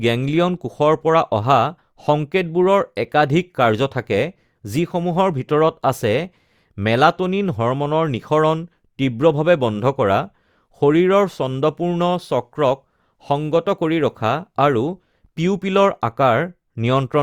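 No technical faults can be heard anywhere in the speech recording, and the signal stays stable and continuous throughout.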